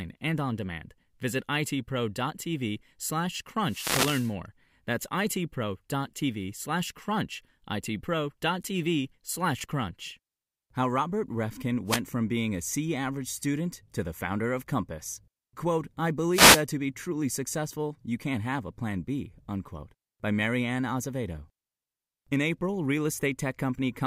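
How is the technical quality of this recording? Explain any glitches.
Three wireless microphone noise hits break into the speech, at 3.64 to 4.34 s, 11.86 to 12.01 s and 16.31 to 16.63 s. The analogue radio link fades as reflections cancel, so receiver noise surges in as brief static swishes.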